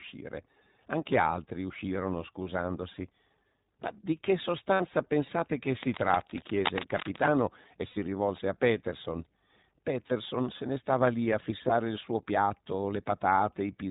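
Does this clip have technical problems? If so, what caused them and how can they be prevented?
Yes. The whole speech clip carries plainly audible iLBC codec damage at 15.2 kbps. Nothing above 4 kHz survives, and the speech sounds slightly rough and synthetic; each 20 ms frame is coded independently. Unlike wideband codec smearing, the high band is simply missing. To prevent it, use a wideband codec such as Opus where the link allows.

Lost iLBC frames appear at 2.44–2.47 s, 4.74–4.82 s between "di che" and "pensate che", 7.88–7.98 s just before "rivolse a", 10.08–10.13 s, and 11.68–11.72 s between "ne stava lì a" and "il suo piatto". The decoder fills each gap of 20 to 80 ms with a repeated, buzzy pitch cycle. Unlike a dropout, there is no silence, and the speech recovers almost immediately. To prevent it, reduce packet loss with a steadier network, a larger jitter buffer or forward error correction.

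Cable scratch noise runs from 5.83 to 7.26 s: dense, uneven rustling bursts at about 5 dB below the speech. These are irregular, unlike steady hiss or regular clicks, and are likely caused by a worn cable or connector being moved. To prevent it, replace or secure the cable and clean the connectors.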